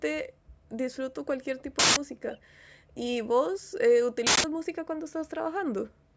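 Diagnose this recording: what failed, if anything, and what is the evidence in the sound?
Two faint, delayed copies of the speech appear, at 1.58 to 1.63 s and 2.30 to 2.39 s. Both trail the original by 392 ms. The first is very weak, around 35 dB down. The second is louder, roughly 20 dB below the speech. The likely cause is echo leak in call processing. A far-end loudspeaker fed a microphone, and the echo canceller let some residue through. It came back to us delayed.

A different fault hits at 1.79 to 1.96 s and again at 4.27 to 4.44 s. Each is a sudden, loud burst of digital noise lasting about 171 ms. That fixed length fits an 8192-sample block. This is an uninitialised buffer at the driver or buffer stage. A block was played out before audio was written into it. The stale memory left in it became harsh noise. The bandwidth stops at 8 kHz, as the call microphone processing would leave it.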